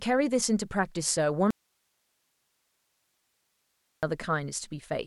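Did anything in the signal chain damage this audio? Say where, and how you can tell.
Yes. From 1.51 to 4.03 s the speech cuts out abruptly, leaving about 2.5 s of plain hiss roughly 50 dB below the signal before it returns mid-flow. This audio dropout to a faint residue is likely an intermittent analogue connection, with the downstream path staying live.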